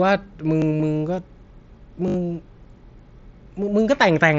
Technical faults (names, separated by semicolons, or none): repeated buffer; concealed Bluetooth headset packet loss